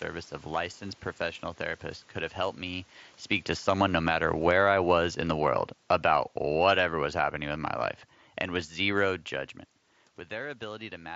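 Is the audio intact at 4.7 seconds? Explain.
No. Automatic gain falling runs from 2.9 to 7.69 s, covering 4.7 s. The gain control judged the input too loud or its background noise too strong, and pulled its gain down gradually by about 8 dB, so the speech and the room background sink together.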